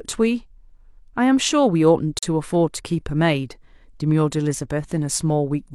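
At 2.19 s the speech cuts out for about 40 ms, resuming at 2.23 s. This is a gap between stream segments: adjacent segment time stamps, which fit 4-second segments, leave a short hole the player fills with silence. It sounds like an abrupt, hard-edged break, with no audio lost.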